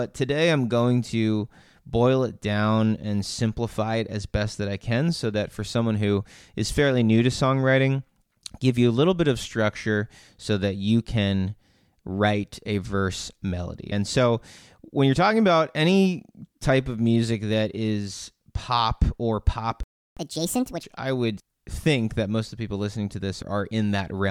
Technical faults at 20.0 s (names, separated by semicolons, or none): playback stall